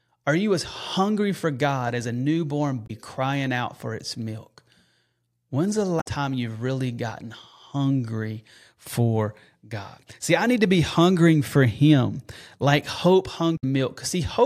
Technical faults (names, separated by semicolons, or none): damaged data in a compressed stream